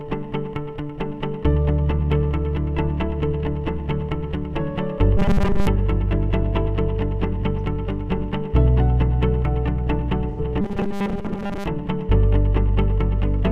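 The audio has two faults. The first is robotic sound from repeated short buffers, heard from 5.18 to 5.67 s and again from 10.61 to 11.66 s. In both stretches the sound turns into a rigid, metallic buzz at 200 Hz. That rate points to a repeated chunk about 5 ms long. The likely cause is new audio arriving too seldom, so the software loops its last short buffer instead of playing the real signal. Roughly 70 percent of each stretch is repeated material. The original is only loosely followed underneath. The second fault is AAC frame loss with concealment, from 10.29 to 10.40 s. About 85 ms of audio is gone, which fits two lost AAC frames. The decoder patched the gap from the last good spectrum. The result is a brief smeared, noisy or phasey patch. It sits just before the second buzzing stretch.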